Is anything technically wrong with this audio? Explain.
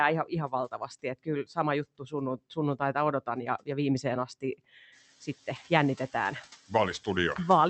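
Yes, a noise suppressor is audibly at work on this speech.

Noise suppressor artifacts run through the whole clip. The background dips between phrases and swells back under the speech. The suppressor estimates steady noise and turns down each frequency band it judges to be noise, frame by frame, taking about 6 dB off the background here. The room noise rises by about 18 dB around 5 s, though that noise still sits about 19 dB below the speech.

Speech cut by the noise suppressor appears twice. Between 0.48 and 1.28 s, short stretches totalling roughly a fifth of a second sound swallowed, dropping by up to about 15 dB. From 1.99 to 2.14 s, a brief piece of speech fades out by up to about 14 dB. In both places the suppressor mistook low-level parts of the speech, such as soft consonants or trailing ends, for background and turned them down with the noise.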